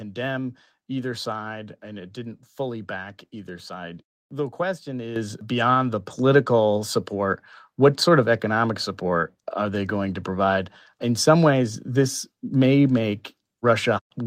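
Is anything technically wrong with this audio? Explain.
Yes, there's a microphone volume stepped up fault, twice. At 5.16 s, just before "beyond the", the input jumps about 8 dB, then at 6.18 s, right after "beyond the", another 4 dB or so. The call software is raising the mic's input level in steps, so speech and background get louder together.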